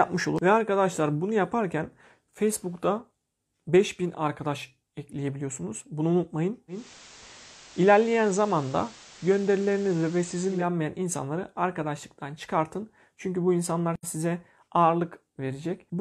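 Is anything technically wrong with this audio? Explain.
Yes. From 6.68 s to 10.69 s the speech shows digital radio blending to analogue. The receiver lost its digital stream and cross-faded over 228 ms to the station's FM broadcast, returning just before "insanları arkadaşlıktan çıkartın". During that stretch hiss rises to roughly 25 dB below the speech and the level shifts by about 2 dB. A spectrogram shows a raised noise floor, bounded by short crossfade ramps.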